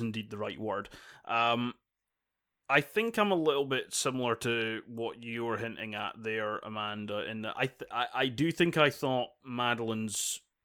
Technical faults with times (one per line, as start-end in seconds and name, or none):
none